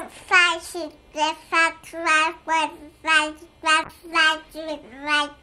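A recording of everyday sounds with a call bitrate drop from 3.84 to 5.01 s. The encoder suddenly gets far fewer bits, so the audio turns coarse and muffled, with the top end cut away. The degradation fits a fall from 128 to about 18 kbps, held for about 1.1 s.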